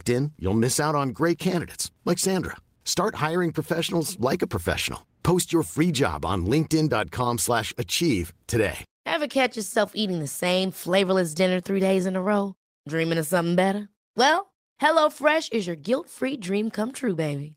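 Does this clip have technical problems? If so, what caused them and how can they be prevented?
No, there are no technical problems in this recording.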